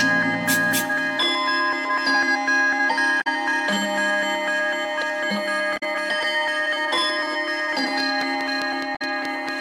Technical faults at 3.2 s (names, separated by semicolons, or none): damaged data in a compressed stream